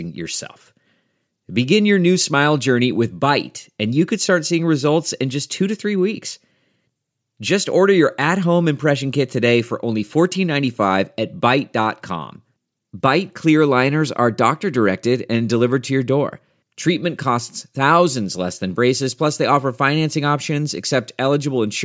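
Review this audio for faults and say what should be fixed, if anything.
No faults are audible; nothing needs fixing.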